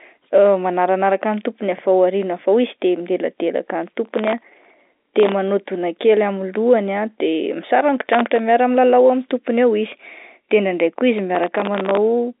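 Processor overload crackle hits the telephone-band speech at 4.05 to 5.32 s, 8.03 to 8.39 s and 11.35 to 11.97 s. Missed sub-millisecond buffer deadlines keep repeating old audio, giving gritty, tearing crackle.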